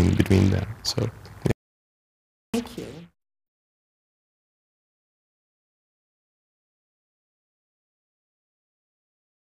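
At 1.51 s the sound cuts off abruptly into dead digital silence, with no room tone at all, and returns mid-flow at 2.54 s, so about 1.02 s is simply missing. This is an audio dropout to silence, likely from the input being lost while the recorder kept writing zeros.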